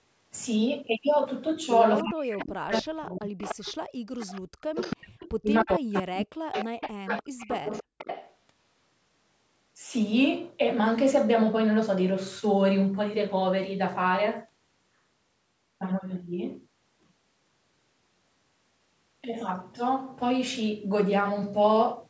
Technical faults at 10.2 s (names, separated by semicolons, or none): none